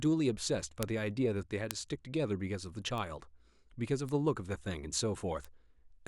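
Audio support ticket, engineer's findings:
Bit error spikes at 0.83, 1.71, 2.98, 4.09 and 5.45 s: sharp broadband ticks, about -11 dBFS first two, about -23 dBFS rest. Flipped bits on digital link or memory.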